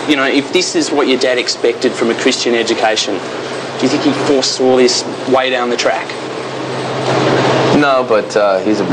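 Hard clipping runs through the whole clip. The signal is driven about 4 dB past full scale, so the highest peaks flatten. Those brief tops crackle.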